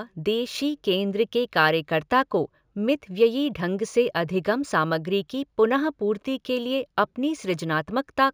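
Imaging from linear upsampling runs throughout the speech. Straight-line interpolation fits a 16 kHz source raised to 44.1 kHz. A faint mirrored image, roughly 35 dB down, sits between 8 and 16 kHz, adding metallic shimmer to sibilants.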